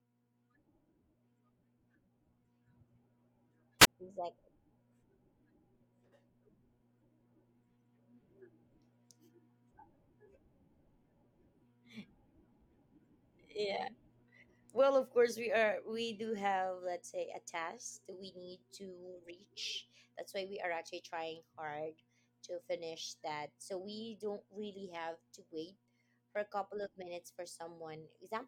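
At 3.80 s a burst of hiss gives way to a 22 ms silent gap before the speech returns by 3.87 s: a wireless microphone squelch dropout, where the fading radio signal triggered the receiver's muting.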